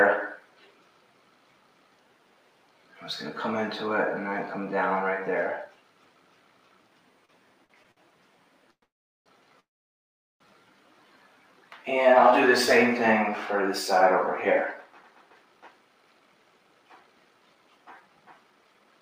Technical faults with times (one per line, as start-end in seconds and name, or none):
0.00-19.02 noise suppressor applied to music or sounds
7.25-7.98 repeated stalls (stutter)
8.71-9.27 call audio freeze
9.60-10.41 call audio freeze
14.88-19.01 jitter buffer speed-up